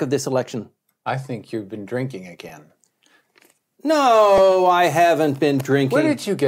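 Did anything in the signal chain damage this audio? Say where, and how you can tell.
Yes. The damage is at the driver or buffer stage: a repeated buffer, occurring twice. At 2.49 s, right after "think you've been drinking", and at 4.38 s, just before "I haven't", a tiny slice of about 2.7 ms loops with hard joins, giving a brief buzzy click rather than a stutter. That fits a 128-sample buffer replayed a few times when fresh audio arrived late. Little or no audio is lost; the repeats are simply inserted.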